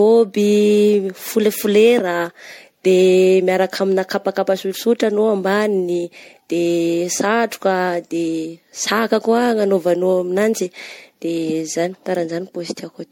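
Throughout this speech clip the sound is swirly and hollow, with a watery smear over the consonants and softened attacks, and nothing comes through above 16.7 kHz. That is generation loss, likely from re-encoding the audio in MP3 around five times, each pass quantising again on a shifted frame grid so the noise and spectral gaps stack up. The damage goes beyond what a single encode at the 64 kbit/s the sound points to would cause.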